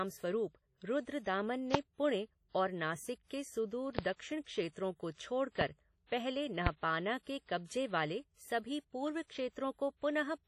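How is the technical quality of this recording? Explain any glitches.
The speech is marred by codec damage throughout and four loud pops.

WMA compression: a transform codec likely squeezed the audio to a low bitrate, around 32 kbps. Its quantisation noise smears across long blocks, giving heavy ringing, washy hiss, with nothing above 19.6 kHz.

Loud pop: a sudden voltage pulse was likely added at 1.74–1.77, 3.99–4.01, 5.61–5.64 and 6.67–6.69 s. Each sharp pop sits over the ongoing speech, the first about 25 dB above it, the rest about 20 dB.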